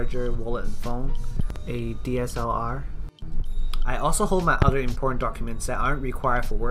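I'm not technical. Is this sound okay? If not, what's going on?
No, there's a loud pop twice: a double pop around 1.4 to 1.58 s and a louder one at 4.62 to 4.71 s, likely an electrical glitch like a plug or switch.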